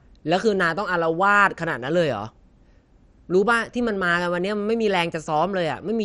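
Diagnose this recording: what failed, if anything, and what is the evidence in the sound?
Codec stage: the speech is dull throughout with nothing above 12.5 kHz and a gurgling, granular roughness, which a clean low-pass filter wouldn't add. This is likely MP2 compression, consistent with roughly 56 kbps.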